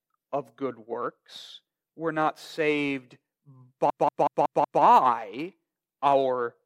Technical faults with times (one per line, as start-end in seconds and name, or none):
3.90-4.83 system hang loop